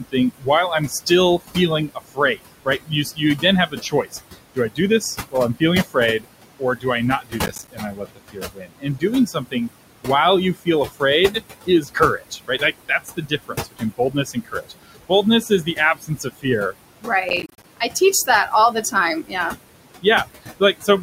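From the start, the background rises and falls between phrases. These are noise suppressor artifacts: the room noise, sitting about 11 dB below the speech, is pulled down by about 20 dB frame by frame. Throughout the clip, soft consonants and word endings also sound swallowed. This is speech cut by the noise suppressor, which mistakes them for noise and lowers them by up to about 22 dB, around seven seconds in all. From 7.46 to 7.68 s, and again from 17.29 to 17.64 s, a gritty crackle tears through the sound. This processor overload crackle comes from missed processing deadlines leaving short silent gaps, which fits buffers of around 10 ms. The first burst spans a handful of misses and the second about twenty.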